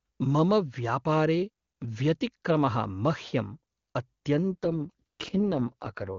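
From 4.52 to 6.18 s the speech turns raspy and synthetic: an AMR rate drop, fitting AMR-WB stepping down from 23.85 to 6.6 kbit/s.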